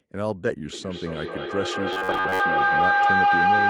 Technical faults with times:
0.73-3.69 feedback howl
1.93-2.40 robotic sound from repeated short buffers

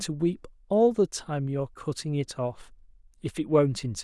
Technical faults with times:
none

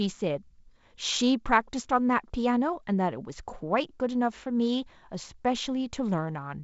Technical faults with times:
none

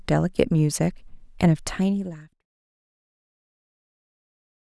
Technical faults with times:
none

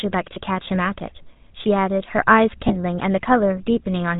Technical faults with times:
0.00-4.19 GSM full-rate codec
0.34-0.37 lost GSM frames
2.68-2.73 lost GSM frames

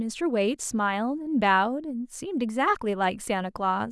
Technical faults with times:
none

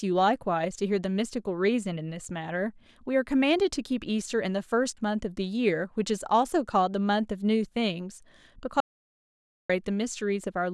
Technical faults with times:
8.80-9.69 audio dropout to silence

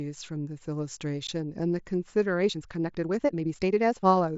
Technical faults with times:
1.27 unconcealed Bluetooth headset packet loss
2.36-4.38 time-stretched section

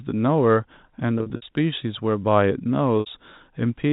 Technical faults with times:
1.18-1.42 packet loss with pitch repetition
3.00-3.06 packet loss with pitch repetition

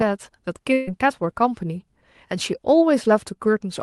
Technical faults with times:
0.73-0.89 burst of packet loss

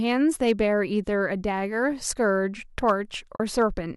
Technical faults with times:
0.10-0.61 hard clipping
2.88-2.91 hard clipping
3.36-3.40 AAC frame loss with muting
3.60-3.63 hard clipping

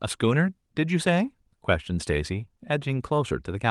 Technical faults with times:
none

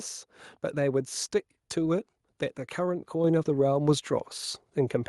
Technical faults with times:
3.24 microphone volume stepped up

